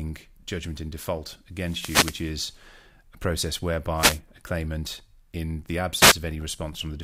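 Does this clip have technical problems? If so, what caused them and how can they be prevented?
Yes. The speech has three wireless microphone noise hits. The first runs from 1.56 to 2.39 s, right after "judgment in default". The second runs from 3.96 to 4.20 s, between "a process" and "a claimant in the". The third runs from 5.99 to 6.15 s, after "a claimant in the". Each is a swish or burst of static over the voice. The analogue FM radio link faded as reflected signals cancelled the direct one, and receiver noise rose into the audio. To prevent this, use a diversity receiver with clear line of sight and a short distance to the transmitter.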